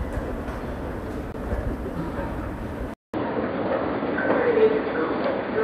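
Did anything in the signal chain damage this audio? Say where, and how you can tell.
Yes. At the network or playback stage, the sound drops to silence from 1.32 to 1.34 s, a gap of 20 ms. It then picks up again. This is likely a Bluetooth stall: interference delayed packets, the headphone buffer emptied, and playback paused until retransmissions arrived.

At the input stage, a 200 ms silence starts at 2.94 s. After it, the sound runs dull to the end, with nothing above 4.7 kHz. The level shifts by a few decibels, and a new, faint noise floor appears. The input likely switched to a poorer device with a narrower band.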